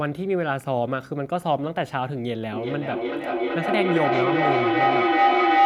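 From 2.53 s to the end of the clip, a feedback howl takes over: a microphone is picking up a loudspeaker playing the same call, and each pass around that loop comes back louder than the last. Instead of dying away, the repeats pile up and narrow to a ringing tone near 700 Hz, pulsing roughly every 400 ms as the loop cycles. It climbs to about 6 dB above the speech and never breaks off.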